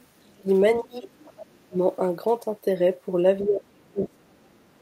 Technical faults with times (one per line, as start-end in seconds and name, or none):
0.00-0.06 other side's voice leaking through
0.23-0.48 speech suppressed in double talk
0.80-1.77 speech suppressed in double talk
0.92-1.58 other side's voice leaking through
3.42-4.48 speech suppressed in double talk
3.74-4.82 other side's voice leaking through